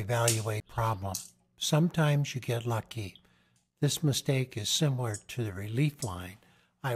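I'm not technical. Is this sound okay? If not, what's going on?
No. At 0.6 s there is a CD skip. The laser reading the disc jumped to a different turn of the disc's spiral track, so the player went silent for a very brief moment, roughly a hundredth of a second, and then carried on from another place on the disc. You hear it as a quick tick or tiny dropout, after which the sound continues from a point that is out of step with what came just before.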